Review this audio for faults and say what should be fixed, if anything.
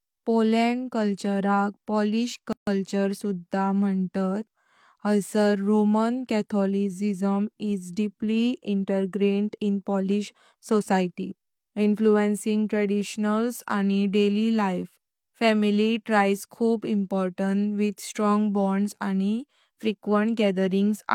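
Separately encoded pieces were joined without trimming the encoder's start-up delay and last-frame padding, leaving a gap at a join of encoded pieces. In this speech, a gap of about 146 ms opens from 2.53 to 2.67 s, with its edges smeared by the codec, and the speech then resumes exactly where it stopped. To prevent it, trim each piece's encoder delay and padding before joining, or encode the material as one continuous stream.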